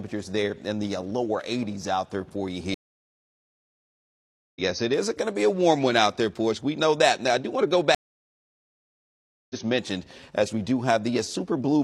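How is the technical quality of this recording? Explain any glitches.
Two dropouts interrupt the recording, both from a stream reconnect. From 2.74 to 4.61 s the audio goes silent for 1.81 s, and from 7.95 to 9.56 s for 1.55 s. Each time the connection broke, and the player started a fresh decoder partway into the stream, so the sound resumes about a second and a half later at the first gap and about a second later at the second. The material in between is simply missing, with a brief muted or fading onset as playback returns. On a waveform each gap is a flat line followed by a fade back into content from a later point, and a spectrogram shows a blank vertical band with mismatched textures on either side.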